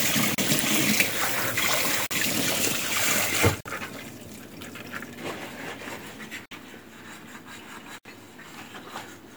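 The sound drops to silence five times, at 0.35, 2.06, 3.61, 6.46 and 7.98 s. The gaps last 35, 45, 49, 56 and 68 ms, each longer than the last. Each is likely a Bluetooth stall. Delayed packets emptied the headphones' buffer, and playback halted until data arrived.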